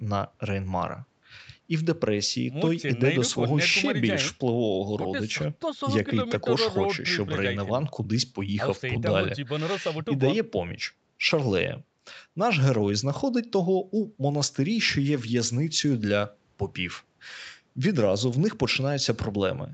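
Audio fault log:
Nothing stood out on listening to this speech.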